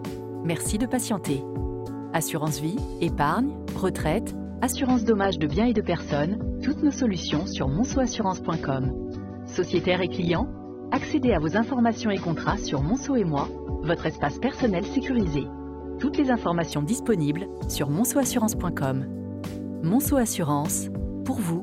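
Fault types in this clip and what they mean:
Adaptive stream at a lower bitrate: From 4.72 to 16.72 s, the treble suddenly stops at 6.3 kHz. Codec artefacts rise, with no gap at either switch. The player fell back to a cheaper stream version, which fits a drop from 96 to 24 kbit/s.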